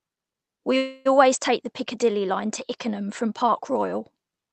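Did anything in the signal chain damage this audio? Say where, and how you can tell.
Yes. From 0.77 to 1.07 s the sound stalls and a smeared, buzzy continuation fills the gap. Speech then resumes intact, delayed by about 280 ms. This is a call audio freeze, likely from delayed network packets draining the jitter buffer.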